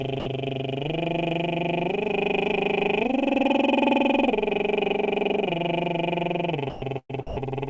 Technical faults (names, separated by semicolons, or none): sound dropped by the voice detector; burst of packet loss